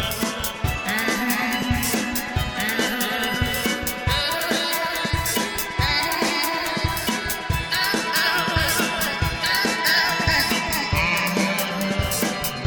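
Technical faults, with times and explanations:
No technical faults, with times and explanations, are present.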